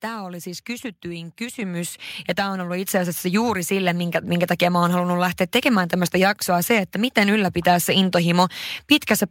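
Speech with the microphone volume stepped up twice, about 7 dB at 1.62 s after "oli siis kysytyin" and about 4 dB at 2.85 s, as the call software raised the input gain. The background jumps instantly with the voice, which a talker moving closer would not cause.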